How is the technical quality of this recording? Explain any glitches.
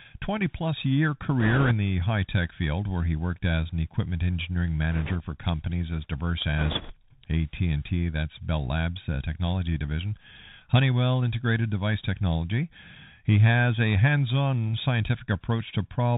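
The recording is narrowband and plainly degraded throughout, with three bursts of crackle.

Throughout, the speech is capped at 4 kHz, with scratchy s sounds and a granular hiss. This is the Bluetooth CVSD headset codec, consistent with a 64 kbps link, whose adaptive one-bit steps lag behind fast, loud changes.

From 1.40 to 1.73 s, between "plus year" and "the high tech field", from 4.92 to 5.16 s, after "as an equipment engineering", and from 6.58 to 6.94 s, after "for companies as diverse", a rushing crackle rides on the speech. These are bit errors on the Bluetooth voice link, at roughly 3 to 5 percent, and they scale with speech level rather than producing isolated clicks.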